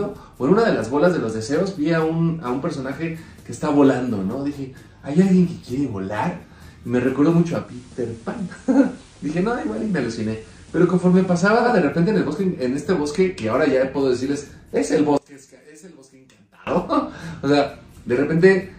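Digital radio blending to analogue from 7.57 to 11.74 s: the receiver cross-fades over about 206 ms to FM, dropping about 1 dB, with hiss around 30 dB down. One channel inverted from 15.18 to 16.67 s: the sound collapses by about 25 dB to a faint residue, likely from reversed polarity cancelling the shared content.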